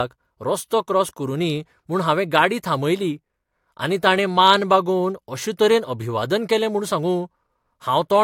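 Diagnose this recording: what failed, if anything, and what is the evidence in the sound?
Nothing failed in this recording. No stage, from the analogue wiring through to playback, leaves an audible trace in the sound.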